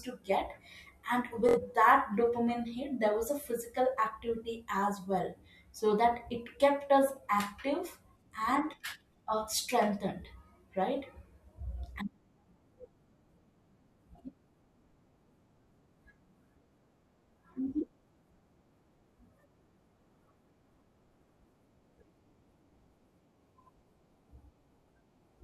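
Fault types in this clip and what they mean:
Bluetooth stutter: a brief machine-gun buzz from 1.49 to 1.58 s, where lost or late packets made the receiver repeat its last slice, skipping about 70 ms.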